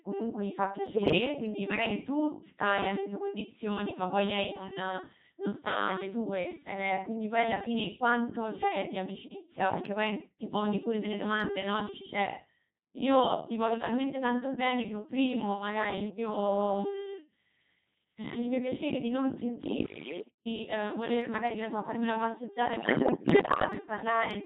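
Codec 2 vocoder, throughout: the speech is rebuilt from pitch, voicing, energy and envelope as summed sine waves, sounding heavily robotic and buzzy, consistent with its 2.4 kbit/s mode. Bit errors on digital voice radio strike at 0.96 to 1.18 s, 8.56 to 8.76 s, 15.98 to 16.18 s, 19.64 to 20.46 s and 22.74 to 23.64 s. Corrupted frame parameters make the voice jump in pitch, level and timbre, producing warbles and bleeping gibberish, worst at the first burst.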